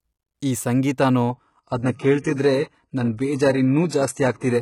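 An adaptive stream at a lower bitrate takes over at 1.30 s, right after "ಈ ಸಂಗೀತನೋ", and stays until the end. The player dropped to a lighter version of the speech stream when the connection slowed, switching without any gap. The top end suddenly stops at about 11.5 kHz, and the upper band turns thin and synthetic, with rising codec artefacts. That points to a step down from roughly 96 kbit/s AAC to a very low-rate HE-AAC stream near 12 kbit/s.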